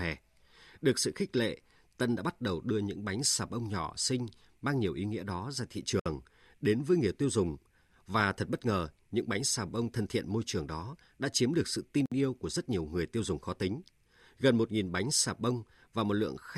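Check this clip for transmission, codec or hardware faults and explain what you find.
There are two gaps at a join of encoded pieces in this speech. They fall at 6.00 to 6.06 s, after "nghĩa đó ra thị" and before "đến với người tiêu", and at 12.06 to 12.12 s, after "chiếm được sự tin" and before "yêu của rất nhiều". They last about 61 and 59 ms and recur every 6 s. Each separately encoded piece kept its encoder start delay and padded final frame, so silence opens mid-phrase with codec-smeared edges. What sets it apart from a packet-loss dropout is that the speech resumes exactly where it stopped, with nothing missing, and the gaps are evenly spaced.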